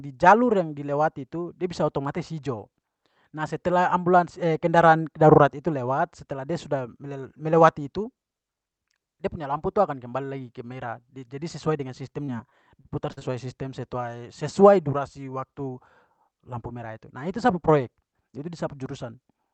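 From 12.25 s to 13.23 s, the speech suffers repeated packet loss, the robotic-sound kind. Audio packets went missing or arrived too late five times in under a second, and each time the receiver bridged the hole by stretching out the last sound it had. The gaps total about 140 ms, the longest 41 ms, so roughly a seventh of that stretch is patched-in sound. The speech turns choppy there, within a call-codec band that tops out near 8 kHz.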